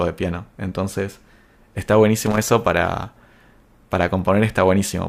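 Right around 2.26 s there's a short burst of loose connector crackle, lasting until about 2.38 s, so roughly an eighth of a second. It sounds like a scratchy, irregular rattle cutting through the speech. What's going on is a worn or grubby contact somewhere in the cable path flickering between connected and open as it shifts, chopping the signal into fragments, with little pops wherever there's DC sitting on the line.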